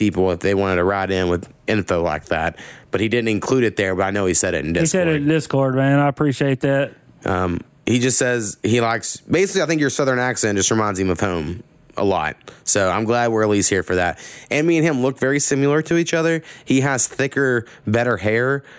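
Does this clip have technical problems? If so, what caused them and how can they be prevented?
Yes. Gain pumping runs throughout the clip, with a level swing of roughly 15 dB, so loud and quiet passages sit unnaturally close together and the speech sounds squashed. The likely cause is microphone gain set far too high, with a fast limiter or compressor clamping down on each loud moment and releasing in the gaps. The call's microphone processing, which stops everything above 8 kHz, is not the problem. To prevent it, lower the input gain until peaks sit well below the limiter's threshold, or soften that stage's attack and release.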